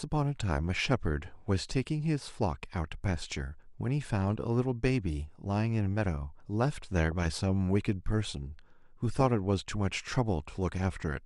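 A speech recording with dull, gurgling, granular distortion across its whole length, most likely from MP2 compression at a low rate, which fits about 80 kbps. On a spectrogram the upper bands appear switched off or flickering in blocky patches, leaving a sharp, ragged ceiling. From 6.98 to 7.27 s there is DAB burbling, short blips of noise as reception bit errors, a small fraction of a percent, corrupt the audio data. The spectrogram shows isolated short noise blips in single sub-bands, and the waveform shows brief irregular bursts.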